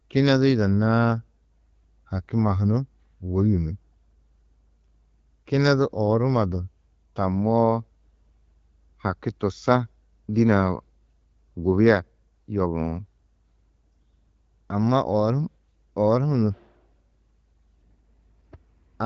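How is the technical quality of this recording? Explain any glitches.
No glitches can be heard anywhere in this recording.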